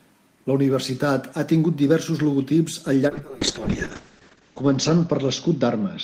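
A call bitrate drop hits this speech clip from 3.09 s, just after "tingut diversos logotips al", and lasts to the end. The encoder's rate falls from 32 kbps to about 6 kbps, staying at that floor for 1.28 s, so the speech is coded far more coarsely and turns rough and watery. The audio bandwidth also shrinks from 20 kHz to 8 kHz, removing the upper frequencies and leaving the sound muffled.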